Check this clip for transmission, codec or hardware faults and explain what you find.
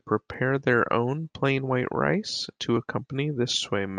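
One fault is audible in this speech clip. At 0.34 s the sound jumps forward with no gap, skipping a millisecond or two. This is likely a dropped buffer (overrun): the recording software fell behind, the hardware overwrote unread samples, and the audio on either side was spliced directly together.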